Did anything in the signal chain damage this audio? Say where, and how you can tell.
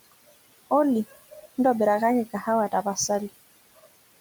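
Yes: noise suppressor artifacts run through the whole clip, introduced at the call-processing stage. The suppressor pulls the steady room noise down by about 19 dB in the gaps, then lets it back up whenever speech arrives, so the background pumps with the talker rather than sitting still. The room noise itself lies about 18 dB below the speech, and the suppressor works on that noise band by band, frame by frame.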